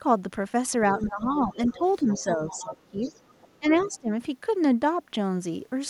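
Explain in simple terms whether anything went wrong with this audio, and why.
Between 0.94 and 3.1 s the talker's voice keeps sinking and thinning, in patches adding up to around a second and a half, then drops much more sharply from 3.59 to 4.1 s. This is speech suppressed in double talk. Both ends of the call were likely talking at the same moment, and the echo canceller, unable to tell the talker from the loudspeaker echo, turned everything down, clipping the talker along with it.

At the same time, from 0.99 to 3.44 s and again briefly at 3.79 to 3.98 s, a faint second voice sits underneath, well quieter than the talker. This is the other side's voice leaking through. The talker's device plays the far end over a loudspeaker, and the microphone picks it back up. The echo canceller likely failed to scrub that pickup out completely, so some of it slips into the recording.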